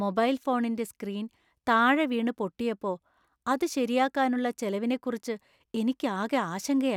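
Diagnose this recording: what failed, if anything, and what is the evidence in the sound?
Nothing failed in this recording. No stage of the chain, from the wiring through to playback, leaves any audible evidence of a fault in the speech.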